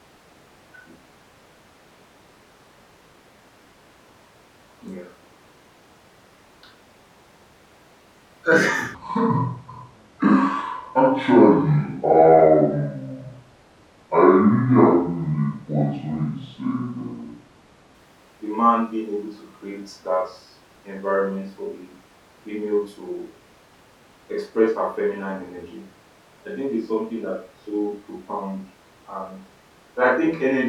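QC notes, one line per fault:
8.95–17.95 s, section at the wrong speed: for about nine seconds the speech drops to 0.64 times its proper rate, so everything drags and sinks roughly seven semitones lower, deep and sluggish, then snaps back to normal right before "the man being able". Pitch and pace fall and recover together at the same instants, which points to this stretch likely being played out against the wrong clock.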